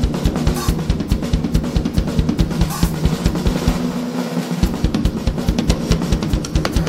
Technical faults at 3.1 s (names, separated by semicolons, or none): compressed frames skipped